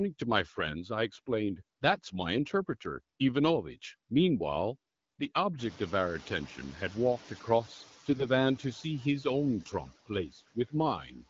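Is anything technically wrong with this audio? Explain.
Yes, two kinds of fault can be heard.

AMR bit errors, 8.10 to 8.26 s: on a weak link, unprotected bits in the AMR-WB frames arrive flipped at a rate of around a couple of percent. The checksum still passes, so bad excitation pulses and gain values are decoded, and the sound turns scratchy and gargly for a stretch that fits roughly eight 20 ms frames.

Speech cut by the noise suppressor, 10.32 to 10.73 s and 11.05 to 11.24 s: after the room noise rises at around 5.5 s, the suppressor mistakes quiet speech for background. It pulls it down by about 14 dB and then about 7 dB, so brief portions sound swallowed and faint.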